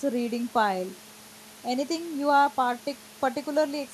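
No technical faults can be heard in this speech recording. Some background noise from the room sits beneath the speech, about 21 dB lower, and it belongs to the recording itself.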